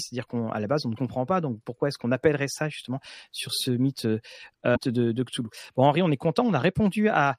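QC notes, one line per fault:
0.93–0.99 s, damaged data in a compressed stream: a brief glitch in the speech as the decoder misreads corrupted frames and loses sync before finding the next frame header.
4.72–4.77 s, damaged data in a compressed stream: another short blip of about 57 ms, where bad bytes garble the frame and the decoder resynchronises at the next valid header.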